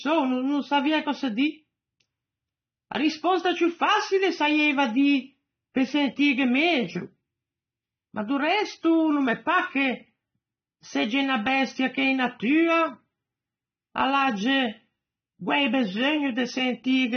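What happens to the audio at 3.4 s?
AAC compression damage is present at 3.4 s, as it is from start to finish of this speech. The sound is likely AAC-LC coding at a low bitrate, with the damage pointing to roughly 24 kbps. To save bits, the encoder drops everything above 6.3 kHz and quantises the remaining spectrum coarsely, leaving gaps. The speech sounds dull and muffled, with a smeared, warbling texture that is plainly audible on sibilants and sustained sounds.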